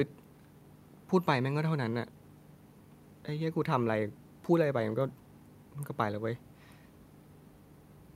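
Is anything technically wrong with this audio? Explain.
No, nothing technically wrong can be heard in this clip. The speech comes through without any audible defect.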